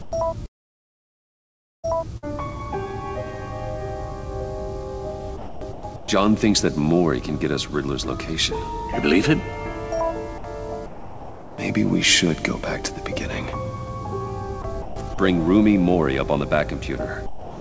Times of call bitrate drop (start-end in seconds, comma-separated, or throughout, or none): none